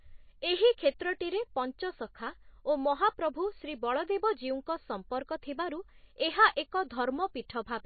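Throughout, a likely low-bitrate MP3 compression stage, fitting roughly 24 kbps, cuts everything above 4.5 kHz, leaving the speech dull, watery and swirly, with smeared consonant onsets.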